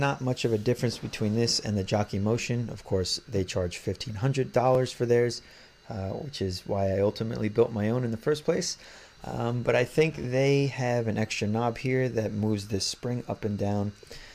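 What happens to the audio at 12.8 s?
Nothing goes wrong at 12.8 s; the audio plays through that moment intact, with no dropout, click or other fault.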